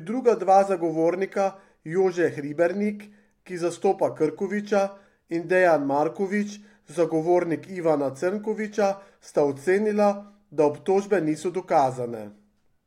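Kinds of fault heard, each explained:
Nothing stood out on listening to this speech recording.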